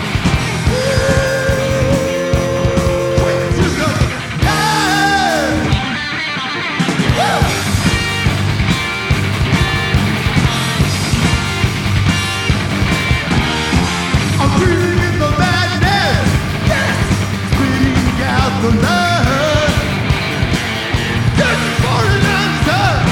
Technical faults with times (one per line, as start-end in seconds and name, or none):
13.05-14.58 channel delay (comb filtering)